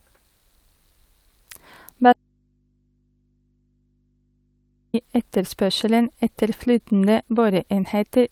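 Audio dropout to a faint residue, 2.13 to 4.94 s: speech cuts abruptly to hum about 45 dB down until "i etterspørselen etter", likely from signal lost on a path that stayed live.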